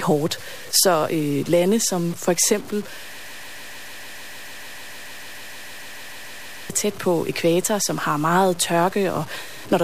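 A speech clip whose samples were likely truncated to very few bits without dither, which fits a 6-bit depth. The rounding error tracks the signal, leaving a gritty, grainy distortion only around 20 dB below the speech that changes with every syllable, with quiet moments sputtering or dropping out. A broken-record loop follows, likely from a stalled player or stream resending its last buffered fragment. Right after "lande som for eksempel", a 149 ms piece repeats back to back, about two dozen times, from 3.18 to 6.70 s. The speech that belonged there is lost, and normal audio resumes at "tæt på ekvator som".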